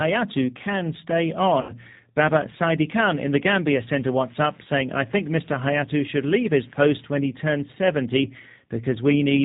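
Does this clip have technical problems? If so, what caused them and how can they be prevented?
Yes. G.729 coding runs throughout the speech: nothing above 4 kHz survives, and the voice sounds rough and faintly synthetic, which fits an 8 kbit/s G.729A stream rebuilding speech from a filter, pitch predictor and a few pulses per frame. Use a wideband codec such as G.722 or Opus instead.

VoIP packet loss concealed by the speech codec occurs from 1.61 to 1.73 s. About 80 ms went missing, which fits four lost 20 ms packets. The decoder stretched its last pitch and filter into a fading buzzy tone or coloured noise, and the voice stays weak or distorted for tens of milliseconds afterwards. Prioritise voice traffic, add a jitter buffer and use forward error correction.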